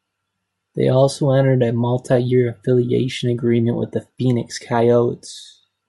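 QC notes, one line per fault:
Throughout, Bluetooth LC3 compression: the speech carries a plainly audible breathy, grainy edge up top, where upper-band detail has been dropped and filled with noise. The likely cause is LC3 coding, with damage that points to about 48 kbps and 7.5 ms frames.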